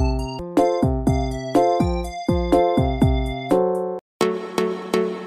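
At 0.39 s the player's laser loses its track, likely from a knock or a flaw on the disc surface, and lands on another turn of the spiral. This CD skip makes the output mute for only a few milliseconds before playback resumes from the new position. The result is a short tick followed by an abrupt discontinuity, as the sound suddenly jumps forward or back by one or more disc revolutions' worth of material.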